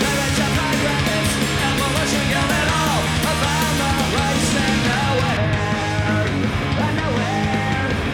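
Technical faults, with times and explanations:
5.37 to 8.14 s, de-emphasis applied wrongly. A treble cut undoing absent pre-emphasis tilts the highs down, about 13 dB at 10 kHz. The sound turns dull and muffled.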